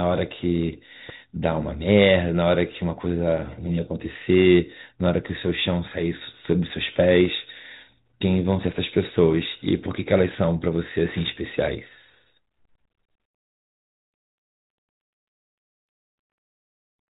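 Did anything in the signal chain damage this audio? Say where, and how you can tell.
No, nothing in the signal chain damaged this speech.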